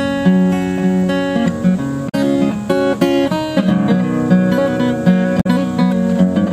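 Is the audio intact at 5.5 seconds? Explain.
Yes, but only just. Damaged data in the compressed stream wrecks about 5.37 to 5.47 s, ending a hair before your mark. Some of the encoded bytes there are corrupted, so the decoder can't read those frames properly, loses its place and has to hunt for the next valid frame header before playback settles. You hear that stretch as a short glitch. By 5.5 s the decoder has locked back on.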